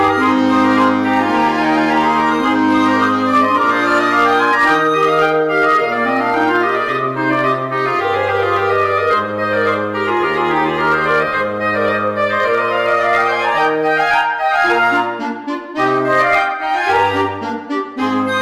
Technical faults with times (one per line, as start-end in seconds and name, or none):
0.00-18.42 hard clipping